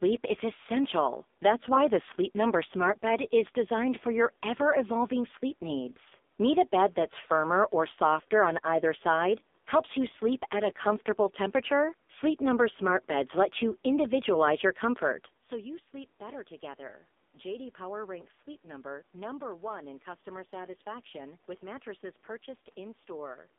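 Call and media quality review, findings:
AMR narrowband mobile codec, whole clip: speech confined to roughly 250 Hz to 3.6 kHz, buzzy and synthetic. Heavy damage fits a low rate near 5.9 kbps, unlike a clean band-limit filter.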